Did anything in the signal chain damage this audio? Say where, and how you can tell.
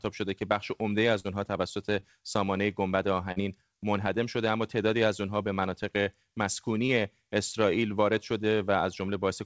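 Yes. Short concealed packet loss on the network leg dropped 20 to 40 ms of audio at 1.20–1.26 s, 2.00–2.04 s, 3.32–3.38 s and 6.86–6.90 s. The decoder bridged each gap by extending the preceding sound, then blended back, leaving brief smears or wobbles there.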